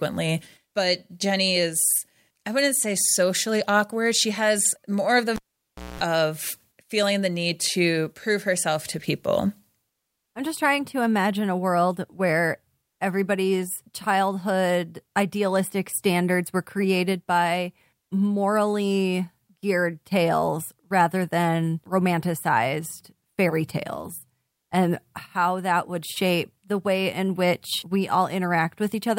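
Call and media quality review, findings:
Cable pulled and plugged in, 5.36 to 6.01 s, right after "has more of the": pop, then about 0.59 s near-silent dropout, then a 0.21 s burst of 60 Hz mains buzz while only the plug tip made contact, then a second pop before "of feeling the need". Likely a loose or knocked input cable or connector on a live line.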